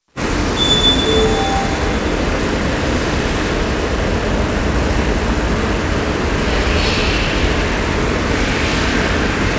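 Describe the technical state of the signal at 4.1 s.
At 4.1 s the sound is intact, with no dropout, glitch or distortion, only the call path's usual coding and nothing heard above 8 kHz, which fits a G.722 codec.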